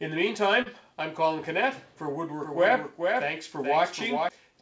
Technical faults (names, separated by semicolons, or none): short concealed packet loss; doubled audio track